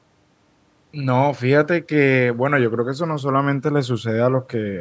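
No faults heard; the speech has only the normal call microphone processing, with the lowest bass trimmed and nothing above 8 kHz.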